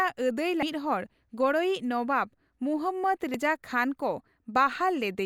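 Speech clip with two brief hits of damaged data in the compressed stream, at 0.62 s and again at 3.34 s. Each one lasts only a few milliseconds. What's going on is that a bit of the encoded stream got corrupted, so the decoder chokes on those frames, loses its sync, and has to hunt for the next valid frame header before normal playback picks back up.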